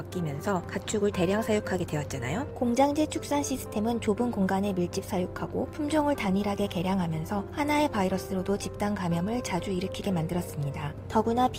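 There's clock drift between sender and receiver the whole way through. The sender's clock runs roughly four percent fast, so the receiving buffer keeps filling up. From 0.41 s to 11.54 s you get repeated timing corrections as the receiver trims short bits to keep up at 104 percent speed, which, if heard at all, comes across as small, unevenly spaced hiccups and a slightly jumpy tempo.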